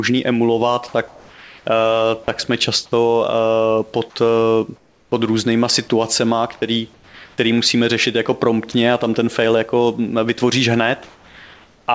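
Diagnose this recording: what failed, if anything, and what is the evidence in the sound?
Sound dropped by the voice detector, at 0.88–0.94 s, 2.24–2.28 s and 8.72–8.74 s. This is a call-processing fault. In each spot a brief fragment of speech, about 20 to 30 ms, vanishes and steady noise fills a gap of 20 to 60 ms. The likely cause is the sender's voice activity detector misreading quiet speech as background, so it stopped transmitting and the receiver substituted comfort noise until the detector triggered again.

Comfort noise in place of the background, at 1.08–1.66 s (ending just before "eh tak jsme"), 4.76–5.12 s and 6.94–7.38 s (between "pod různýma situacema který" and "musíme řešit jako"). This is also call processing. In these pauses the textured room background gives way to a flat, featureless hiss about 3 to 4 dB quieter, sitting roughly 27 to 37 dB below the loudest speech. 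This points to discontinuous transmission: the sender likely went silent and the receiver synthesised noise shaped from occasional background updates.

Onset clipped by the voice detector, at 2.90–2.92 s, right after "eh tak jsme". This fault also sits in call processing. The next sound starts abruptly, missing its first 20 ms or so, with synthetic noise where the soft attack should be. The detector was likely slow to register that speech had resumed, so the opening moments were never sent. All of this plays over a call path whose band stops at 8 kHz, consistent with G.722.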